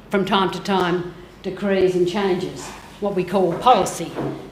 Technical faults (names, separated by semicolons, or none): gap between chunks